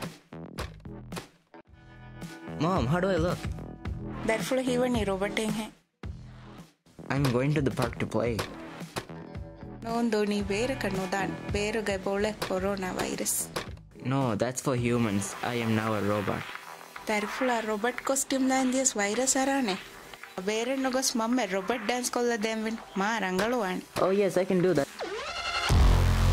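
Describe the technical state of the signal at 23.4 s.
At 23.4 s the signal is intact, with no dropout, clipping, glitch or other audible fault.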